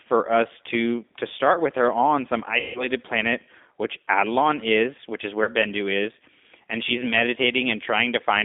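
Throughout, the speech carries the G.729 codec at 8 kbit/s: the line is confined to roughly 250 Hz to 3.6 kHz, and the voice sounds rough and slightly synthetic because it is rebuilt from a vocal-tract filter and sparse pulses, unlike the hiss or swirl of plain low-bitrate transform coding. From 2.60 to 2.85 s, VoIP packet loss concealed by the speech codec turns about 150 ms of missing audio, which fits five lost packets, into a stretched buzzy tone or coloured noise that fades and stays weak after it, rather than the hard silence or click of a plain dropout. A shorter instance at 5.44 to 5.50 s, about 30 ms or one packet, leaves only a brief smeared buzz or noise.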